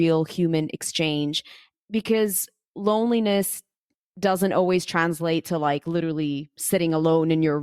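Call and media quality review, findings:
Nothing stood out on listening to the speech in this recording.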